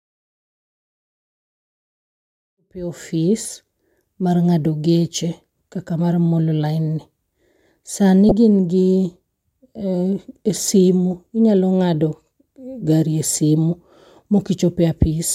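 From 8.29 to 8.32 s, just before "ka in", a corrupt frame decoded: one damaged compressed frame misplaces energy, giving a short chirp, squeak, blip or burst of noise, a brief spectrogram smear and waveform spike.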